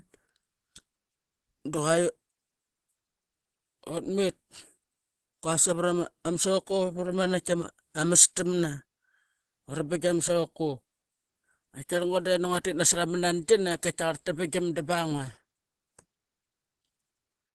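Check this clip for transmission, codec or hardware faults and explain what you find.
One codec fault is present. Opus compression, throughout: the speech sounds muffled and hoarse, with nothing above 12.2 kHz, likely from Opus's hybrid speech mode at a low bitrate near 16 kbps.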